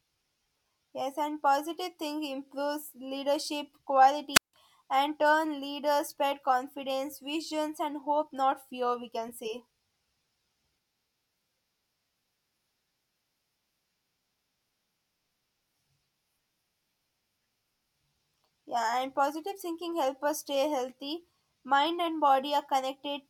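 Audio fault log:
4.33 to 4.54 s, wireless microphone squelch dropout: just after "positive think improves leadership" a short burst of hiss rises, then the speech falls into a hole of near silence lasting about 163 ms before returning with "and turn leaders spread". The analogue FM radio link faded enough that static came up on the carrier, and the receiver's squelch then muted its output entirely until the signal recovered.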